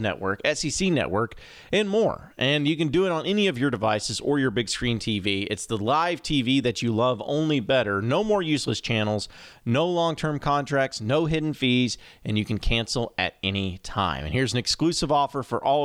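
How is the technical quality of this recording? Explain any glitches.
No technical faults are audible in the recording; the signal stays continuous and steady throughout.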